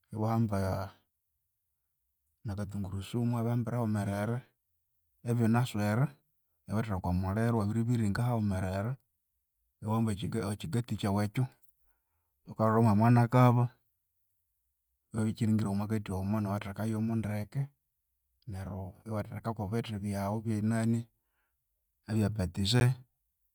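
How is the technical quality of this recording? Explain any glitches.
Two brief dropouts interrupt the speech. A block of digital silence occurs at 8.17 s and again at 22.80 s, lasting 5.8 ms and 11.6 ms, which fits buffers of 256 and 512 samples left unfilled in time. The signal snaps to silence and back with no fade, so each is heard as a tick or dip.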